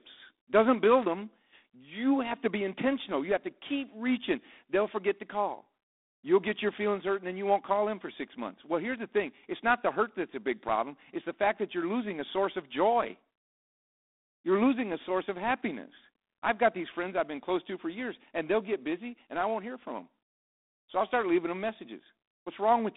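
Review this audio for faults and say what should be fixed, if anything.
The speech carries G.726 ADPCM damage from start to finish: a harsh, rasping hiss that rises and falls with the speech level, which fits G.726 running at 24 kbit/s, where only 3 bits per sample code the error of an adaptive predictor. The band sits at about 250 Hz to 3.6 kHz, and nothing passes above 3.8 kHz. On a spectrogram, energy stops at a hard ceiling near 3.8 kHz, with grainy noise filling the band under each syllable. The waveform looks roughened at speech peaks. To prevent it, capture over a wideband path, or at least run G.726 at 32 kbit/s or above.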